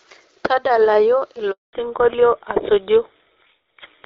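At 1.51 s the speech cuts out in a handover gap: the call is being passed from one network to another, and during the switch no speech frames reach the receiver. The sound decays within a few tens of milliseconds and stays silent for 220 ms, until the new link comes up at 1.73 s. Whatever was said in that interval is gone.

From 1.73 s to the end there is a fallback to narrowband. Before the gap, the speech has the fuller top end of the AMR wideband (HD Voice) codec, whose light coding damage fits its 12.65 kbit/s mode. After the handover, nothing remains above 4 kHz, so the speech sounds duller and coarser. The narrower band and the rougher texture point to the call dropping to an older narrowband codec, most plausibly GSM full rate at 13 kbit/s.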